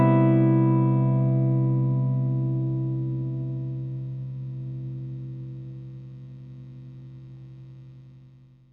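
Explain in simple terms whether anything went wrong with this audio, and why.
Nothing went wrong here; the sound holds up from its opening moment to its last with no audible technical fault anywhere.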